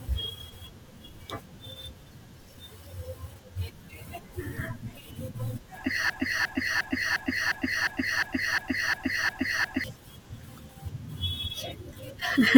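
At 6.10 s the speech locks into a broken-record loop: a 355 ms fragment replays back to back, 11 times, until 9.84 s. The likely cause is a stall in the player, encoder or stream that kept resending the last fragment it held, so the speech belonging to those seconds is lost. Unlike an echo, which decays, or a stutter, which adds gaps, every repeat here is identical and seamless.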